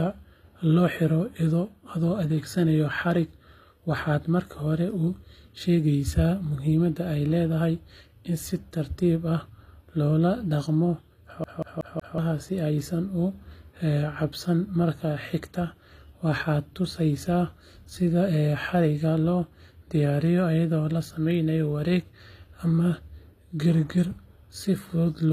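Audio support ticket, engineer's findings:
Encoder path, throughout: likely HE-AAC compression, spectral band replication rebuilding the treble from copied lower bands; the damage is plainly audible and fits a low bitrate around 24 kbps. Speech sibilants sound gritty and metallic, upper harmonics misaligned above the crossover, with no content above 15.4 kHz.

Playback transport, 11.44 to 12.18 s: CD stuck on one turn. Laser jumps back one track at the same point each rotation. The same 0.19 s segment repeats four times, each jump marked by a brief mute, giving a fast, even skipping-disc stutter.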